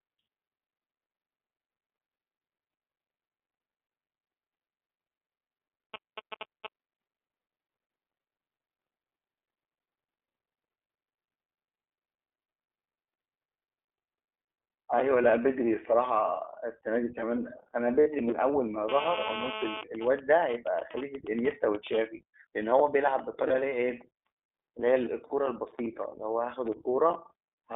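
iLBC codec damage runs through the whole speech recording. The line passes only about 300 Hz to 3.6 kHz, and the independently coded excitation leaves the voice plainly rough and slightly synthetic. That roughness fits iLBC's 15.2 kbps mode with 20 ms frames.

GSM signalling bursts appear from 5.94 to 6.67 s, a few dB below the speech. A nearby 2G phone transmitted short groups of radio bursts that the audio circuit rectified. They sound like a galloping dit-dit-dit of brief 217 Hz buzzes.

Lost iLBC frames occur at 15.22 to 15.25 s and 18.00 to 18.08 s. Missing packets forced the decoder to repeat the last pitch cycle with added noise. The result is a short, buzzy, held vowel, longest at 18.0 s, where it suggests three lost frames. The voice is right again almost at once after each gap.

GSM phone buzz follows from 18.89 to 19.81 s at about 5 dB below the signal. A phone in an active call was transmitting 217 bursts per second, which were rectified into a hard, raspy, harmonic-rich 217 Hz buzz unrelated to the speech.

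GSM signalling bursts return from 19.83 to 21.99 s, quieter and well under the speech. This pattern comes from the call phone sending sparse bursts while its user was silent. More lost iLBC frames, each a single brief buzzy hold, fall at 20.92 to 20.97 s, 23.48 to 23.51 s and 25.28 to 25.32 s.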